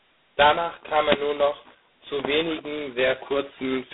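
Speech throughout, with G.726 ADPCM damage: a harsh, rasping hiss tracking the speech level, which fits 16 kbit/s coding, and nothing above 3.9 kHz.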